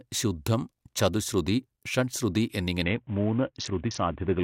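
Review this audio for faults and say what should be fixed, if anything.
From 2.83 s to the end of the speech, a Bluetooth SBC bit pool drop sets in: treble goes dull and gritty quantisation noise rises. The sound fits the bit pool falling from about 28 to 5, near 54 kbps, starving the upper sub-bands. Reducing link congestion and interference on the Bluetooth connection would keep the bit pool from dropping.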